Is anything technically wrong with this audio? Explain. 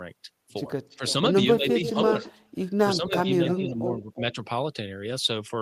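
Yes, this speech clip has two related faults.

Echo leak occurs at 0.9–1.13 s, 1.81–2.33 s, 3.48–3.7 s and 4.14–4.2 s. A delayed copy of the speech, lagging by about 340 ms, is likely loudspeaker pickup that the far end's echo canceller left in and sent back. It sits about 15 dB down, except at 1.81 s, where it is only about 5 dB down. On a spectrogram it appears as a weaker repeat of the harmonic pattern shifted a third of a second later.

Speech suppressed in double talk occurs at 0.97–1.02 s, 2.33–2.45 s and across 2.96–4.37 s. The speech dips while both sides overlap, likely because the echo canceller could not separate talker from echo and attenuated both. The drop is about 10 dB in the first and last spans and about 30 dB at 2.33 s. The waveform shows abrupt envelope notches, and the spectrogram shows the energy thinning or blanking there.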